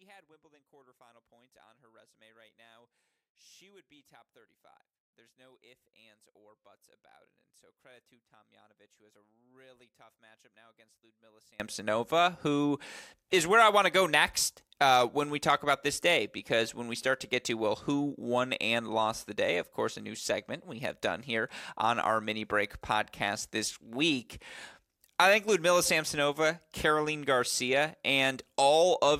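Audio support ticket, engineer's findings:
0.0–11.6 s: speech nearly gone on mono fold-down, level down about 31 dB, faint residue only. Likely one channel inverted: reversed polarity on one leg, so the shared centre content cancels when L and R sum. Waveform: near-flat trace until 11.6 s, then full-height speech. Spectrogram: low end and voice band almost blank, faint residue remaining.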